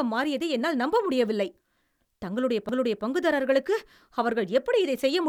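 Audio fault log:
2.69 s, CD skip: a tiny tick and a near-instant dropout of just a few milliseconds right before "பங்குதாரர்களுக்கு அவர்கள்". The laser jumped onto a different turn of the spiral, so playback picks up from another spot and the speech lurches.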